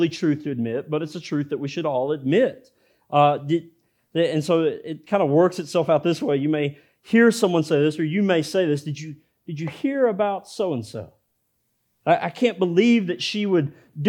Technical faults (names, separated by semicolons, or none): none